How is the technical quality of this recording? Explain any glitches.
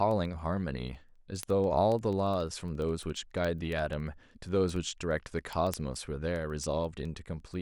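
Word clock ticks run through the whole clip, from 0.11 s to the end. Unlocked clocks slip about every 70 ms, dropping or repeating one sample, around a hundred sharp, uneven ticks.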